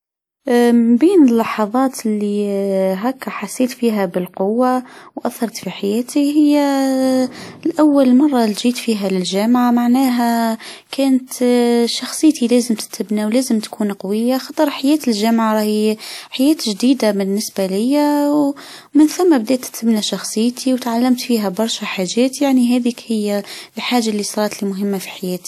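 A brief wash of hiss rises out of near-silence at 14.51 s and runs for about 59 ms until 14.57 s, blurring the sharp onset of "حياة الجامعة راي". This is pre-echo: the transform codec spread coding noise meant for that loud attack across its whole block, so it fills the quiet lead-in.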